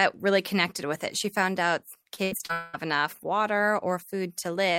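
From 2.03 to 2.51 s the speech breaks up with repeated packet loss, giving that robotic sound. Five short holes, the longest about 75 ms, each get patched by stretching the previous sound, so roughly 37% of that half-second comes out choppy.

Right after, from 2.53 to 2.75 s, comes what's likely a long network dropout. About 200 ms of the speech is gone, filled with a smeared continuation of the last sound that never falls to silence before the speech picks up again further on.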